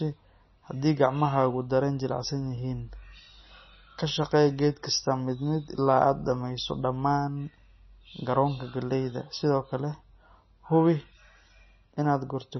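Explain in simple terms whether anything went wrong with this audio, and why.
Yes, something went wrong from start to finish. The speech sounds watery and swirly, and nothing is heard above about 5.9 kHz. This is likely MP3 compression, squeezed hard. The encoder dropped the treble and let faint details flicker on and off.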